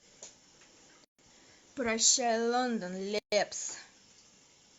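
Separately encoded pieces were joined without trimming their encoder delay and end padding, leaving a gap at each join of encoded pieces. The speech drops out from 1.05 to 1.19 s (141 ms) and from 3.19 to 3.32 s (136 ms), two seconds apart, with smeared edges before it resumes where it stopped.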